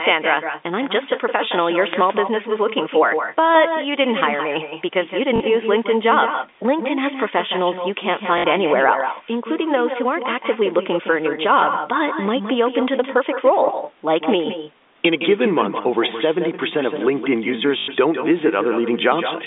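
A speech recording runs throughout with echo with no canceller. Each phrase returns around 150 ms later, about 8 dB quieter and thinner. A far-end loudspeaker feeds a microphone, and nothing removes the copy. There are two wireless microphone noise hits, from 1.76 to 2.04 s and from 16.94 to 17.06 s. Each is a brief swish of static. The analogue radio link faded and receiver noise rose over the signal. Packet loss with the last packet repeated causes robotic stutters at 5.36 s (40 ms), 8.38 s (60 ms) and 17.78 s (100 ms). The longer runs buzz near 50 Hz. That fits 20 ms packets replayed until new audio arrived.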